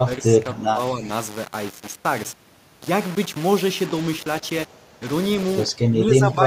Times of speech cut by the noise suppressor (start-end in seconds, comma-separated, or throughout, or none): none